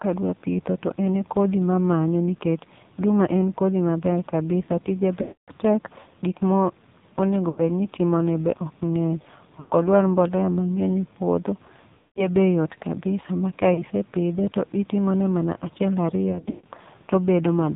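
Throughout, the speech passes through the AMR narrowband mobile codec at a very low rate, which fits 5.9 kbps. Everything above 4 kHz is gone, and the sparse pulse excitation of the vocal-tract model makes the voice buzzy and synthetic. On a spectrogram the energy stops in a hard ceiling at 4 kHz, and the harmonics look smeared and blotchy.

Lost AMR speech frames then break the signal at 5.22 s (about 260 ms missing), 7.50 s (80 ms), 9.60 s right after "be ok ng'eny" (100 ms), 11.98 s (180 ms), 13.74 s between "yot kabisa ma ka" and "pidhe to itimone mana" (40 ms), and 16.32 s after "to itimone mana achiel" (200 ms scattered over 320 ms, longest run 140 ms). Each time, the decoder repeats the last good pitch and spectral settings at falling gain. The sound stretches into a droning warble and then fades. In the waveform this shows as a decaying envelope that drops to near silence in the longer gaps at 5.22 s and 11.98 s. 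On the spectrogram it appears as frozen horizontal harmonic bands, followed by a weak, rough onset when speech returns.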